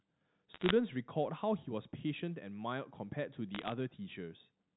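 From 0.54 to 0.71 s and again from 3.55 to 3.72 s, the speech breaks into crackle. These are bit errors on a digital phone line. Flipped bits corrupt single samples in the 8 kHz logarithmic stream. A flip on the sign or a high-order bit throws one sample far off and makes a sharp tick. The first burst is a little denser, with perhaps one bit in two hundred wrong. Between the ticks the band-limited telephone sound is unchanged.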